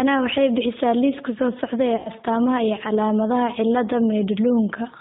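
G.729 codec damage runs through the whole speech clip, plainly audible. The band stops at 4 kHz and the voice is rebuilt from a vocal tract filter, pitch predictor and sparse pulses, giving a rough, slightly synthetic texture that fits an 8 kbit/s G.729A stream.

VoIP packet loss concealed by the speech codec occurs from 1.96 to 2.09 s. About 90 ms of audio, likely three packets, never arrived. The decoder stretched its last pitch and filter with falling gain, so the voice turns into a fading buzzy or noisy smear before recovering.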